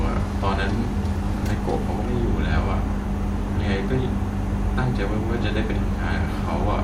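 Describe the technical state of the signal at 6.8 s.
At 6.8 s the speech signal is intact, with no audible fault.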